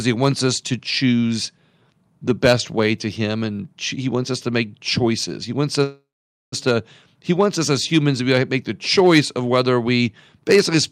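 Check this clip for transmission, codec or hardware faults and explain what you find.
One fault stands out, a call audio freeze. From 5.83 to 6.54 s the speech stalls: the last sound hangs on as a fading buzz, then about half a second of silence, before resuming at "to he wants us" with nothing lost. Delayed packets likely emptied the jitter buffer, so the receiver padded a 0.69 s gap.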